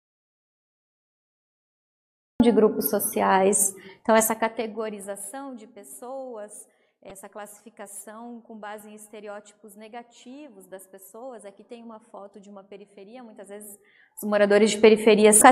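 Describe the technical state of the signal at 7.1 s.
At 7.1 s the signal shows damaged data in a compressed stream, spanning 7.08 to 7.11 s. Corrupted bytes there left the decoder unable to read those frames, so it lost sync and hunted for the next valid header, producing a brief chirp, squawk, click or short hole.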